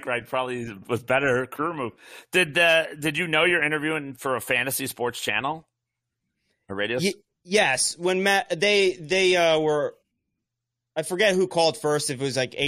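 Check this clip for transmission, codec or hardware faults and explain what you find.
Nothing found: the speech carries no fault at any point in the recording.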